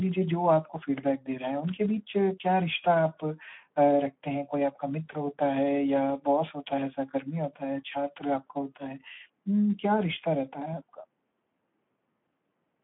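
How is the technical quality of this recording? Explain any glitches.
The quality is poor, with Speex codec damage plainly audible throughout. Heavy low-bitrate coding leaves the excitation starved, so speech sounds hoarse and noisy, consistent with about 11 kbps. The band runs about 150 Hz to 3.4 kHz, with nothing above 3.8 kHz.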